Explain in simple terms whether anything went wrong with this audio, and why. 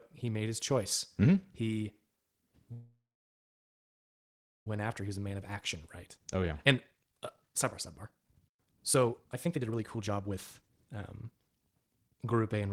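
A call audio freeze runs from 2.72 to 4.67 s. The sound stops for about 1.9 s, fading briefly and then going silent for about 1.7 s, before picking up exactly where it left off, so nothing is lost and a pause is inserted instead. The likely cause is that the audio data was held up in transit, so the receiver's buffer ran dry and it had nothing to play until the data arrived.

A jitter buffer speed-up follows, first from 5.01 to 5.77 s at about 110% speed, then from 6.17 to 12.62 s at about 129%. After the held-up audio arrived all at once, the receiver had more stored than it wanted. To catch up, it repeatedly cut out tiny slivers of speech, roughly 70 ms in the first stretch and around 2 seconds in the second. The speech sounds rushed but stays at its normal pitch.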